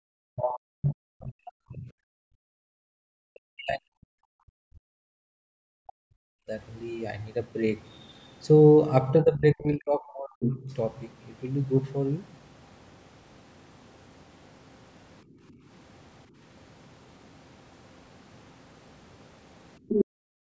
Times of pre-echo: none

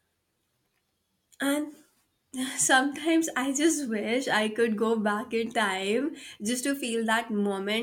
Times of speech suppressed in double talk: none

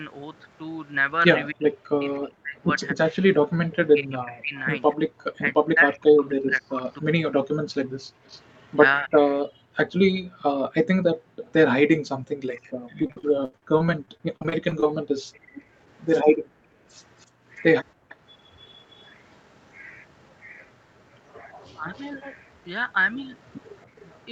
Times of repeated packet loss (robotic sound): 13.02-14.86

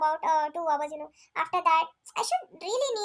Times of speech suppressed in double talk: none

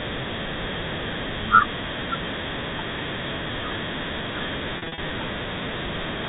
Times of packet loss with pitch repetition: 4.78-4.98

